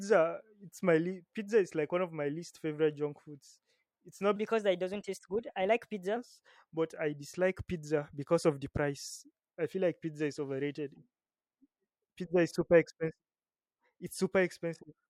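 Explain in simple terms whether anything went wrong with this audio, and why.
From 4.36 to 6.16 s the speech suddenly sounds hurried and higher, about three semitones up, then returns to normal. This is a section at the wrong speed: that stretch plays about 1.16 times too fast, likely because it was played back on the wrong clock.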